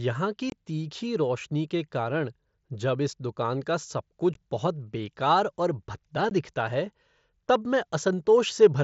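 Three quick dropouts from unconcealed Bluetooth headset packet loss, at 0.50–0.52 s just before "तीखी रोशनी के कारण", at 4.34 s after "दुकान का सब कुछ", and at 6.30 s after "बहुत बेकार और भद्दा". Lost headset packets left silence or an idle pattern, so each gap has hard, abrupt edges, audible over the light graininess of the mSBC link.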